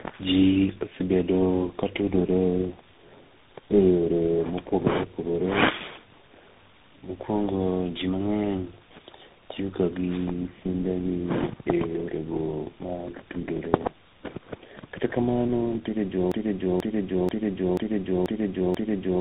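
At 16.32 s, after "kata kamano ntiere", a broken-record loop begins. A 486 ms fragment repeats six times to the end. A stall likely caused it.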